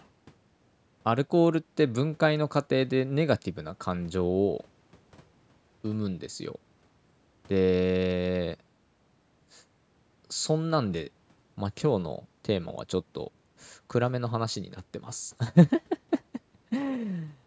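No faults are present in the speech; the call microphone processing behaves as expected, with its high-pass trimming the lowest bass and nothing above 8 kHz.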